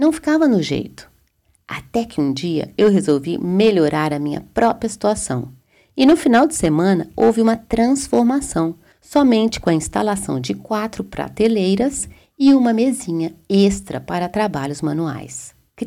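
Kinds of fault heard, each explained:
Hard clipping: the louder peaks of the speech carry a brittle crackle across the whole clip. The level was pushed about 6 dB beyond what some stage in the chain could pass, so the tops of the waveform were cut flat. Only a small share of samples, well under one percent, reach that ceiling, but each flattened peak throws harmonics high into the spectrum, and those harmonics are the crackle.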